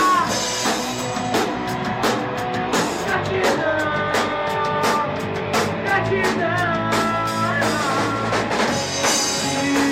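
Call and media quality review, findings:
No faults found in this audio. No symptom to time or attribute to a component, so there are no findings to log.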